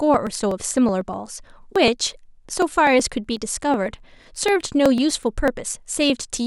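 A background task is blocking the USB bus or audio driver every 0.124 s, giving periodic USB or driver dropouts from 0.14 s to 6.35 s. Each time, roughly a millisecond of audio is skipped outright rather than filled, so the speech waveform jumps and leaves a tiny discontinuity. Around fifty of these land evenly through the speech, heard as a steady ticking of about eight clicks per second that rides along wherever the voice is sounding.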